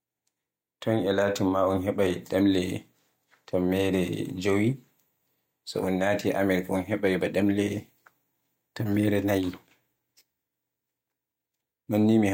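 No technical faults can be heard anywhere in the recording.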